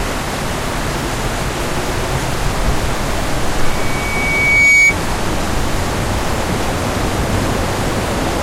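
A microphone picked up its own loudspeaker, and at 2.3 kHz the loop gain rose above one, causing loudspeaker feedback squeal from 3.63 to 4.96 s. A single piercing tone swells over about a second until it sits roughly 10 dB above the sound.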